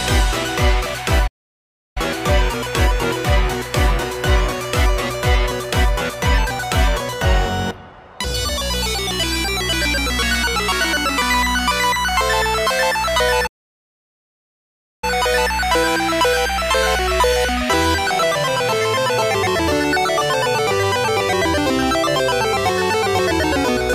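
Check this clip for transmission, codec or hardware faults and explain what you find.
Two playback stalls interrupt the clip, at 1.27 to 1.97 s and at 13.46 to 15.04 s. The likely cause is the player running short of data or having its output thread blocked, so nothing reaches the output until it catches up. Each time, the sound cuts off mid-flow into silence, about 0.69 s for the first gap and about 1.56 s for the second, before carrying on again.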